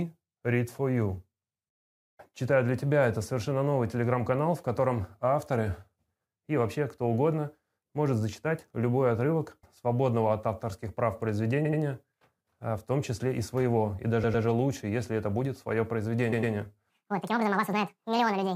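Repeated frames occur at 11.64 s, 14.23 s and 16.32 s, where a short stretch of compressed audio was decoded again instead of moving on. At 11.64 s a block of about 78 ms plays two extra times, and at 14.23 s and 16.32 s a block of about 105 ms does the same. Each sounds like a quick stutter, adding roughly 0.16 s and 0.21 s to the running time.

The section at the wrong speed runs from 16.90 s to the end at 18.55 s. The audio plays 1.8 times too fast, so it is hurried and raised by roughly ten semitones, with pitch and tempo shifting together. The likely cause is that this final part was played back or resampled against the wrong clock rate.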